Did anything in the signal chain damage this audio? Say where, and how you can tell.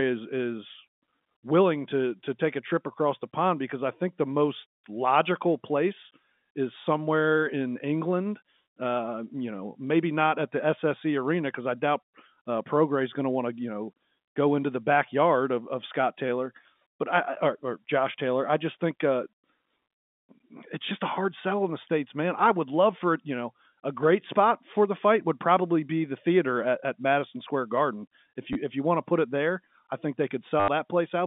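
Yes, at the network stage: packet loss with last packet repeated. At 28.53 to 28.55 s, just before "if you want to", there is a 20 ms stutter, and at 30.6 to 30.68 s, just after "it there I think", an 80 ms one. The longer run buzzes at about 100 Hz, which fits 10 ms packets replayed until fresh ones arrive. A zero-filled dropout would leave a hole, not a buzz.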